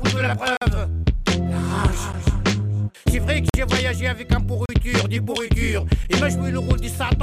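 Blocks of digital silence occur at 0.57–0.62 s, 2.13 s, 3.50–3.54 s, 4.66–4.69 s and 6.04 s. They last 12 to 46 ms, which fits unfilled 512- to 2048-sample buffers. Each cuts out and back abruptly, the two 12 ms gaps as ticks and the longer ones as short holes: a flat waveform line, and a blank spectrogram stripe with broadband edges.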